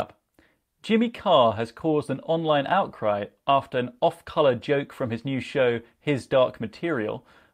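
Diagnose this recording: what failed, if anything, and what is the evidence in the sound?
Nothing in the chain appears to have failed: the speech signal stays continuous and stable throughout, with no audible breaks, level disturbances or added noise.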